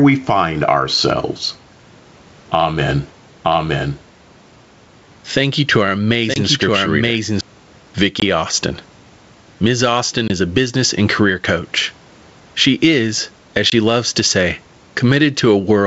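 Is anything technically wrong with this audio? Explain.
Yes. This speech clip has three problems: pumping gain, a doubled track, and brief dropouts.

Gain pumping runs throughout. The input gain is set too high and a fast limiter most likely pulls the level down by around 10 dB on every loud syllable. On a waveform the envelope looks flattened.

A doubled audio track appears from 3.45 to 7.41 s. A second full-band copy trails the original by about a second and sits about 5 dB lower, likely from a slower capture path or an edit that kept two out-of-sync copies. It has no reverb tail and starts and stops abruptly. A spectrogram shows the same patterns repeated one second later.

Packet loss on an ADPCM call causes 20 ms holes at 6.34, 8.20, 10.28 s (just before "a business and career") and 13.70 s (between "is as" and "loves to say"). Each gap fits one lost packet filled with silence. The decoder's predictor and step size then drift, so the audio returns slightly distorted before settling. 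A spectrogram shows sharp-edged vertical gaps.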